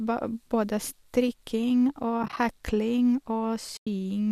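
At 2.23 to 2.37 s, just after "både strikking", AAC frame loss with muting leaves brief soft dropouts. About 60 ms of speech vanishes in short gaps, fading out and in. At 3.77 to 3.87 s, a 100 ms hole follows.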